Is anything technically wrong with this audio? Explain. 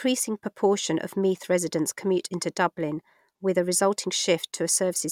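No, no technical faults are audible.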